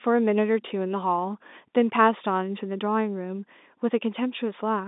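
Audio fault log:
No faults detected.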